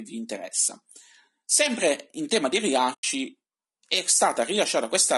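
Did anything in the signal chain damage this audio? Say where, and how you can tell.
Yes. The codec stage is at fault throughout this speech. The voice sounds rough and grainy, with noise filling the gaps between harmonics. This is likely low-delay AAC compression, as in AAC-ELD. Its short frames resolve pitch poorly, and the damage fits a low bitrate near 32 kbps.

The network stage caused AAC frame loss with muting from 2.93 to 3.04 s, right after "in tema di". The sound drops into a soft-edged hole about 100 ms long, which fits five lost frames. The decoder zeroed their spectrum, and the overlapping windows faded it out and back in.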